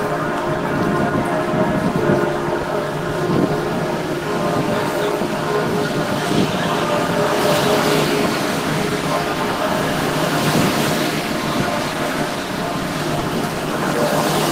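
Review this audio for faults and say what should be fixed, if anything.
Two short concealed packet losses occur, at 2.61 to 2.65 s and again at 13.19 to 13.23 s. Each time, about 20 ms of audio arrived too late or not at all, and the decoder bridged the hole by extending the preceding sound before blending back, giving a brief smear or wobble rather than silence. That filled-in continuation distinguishes it from a plain dropout, which would leave an audible hole. A larger jitter buffer with forward error correction would prevent it.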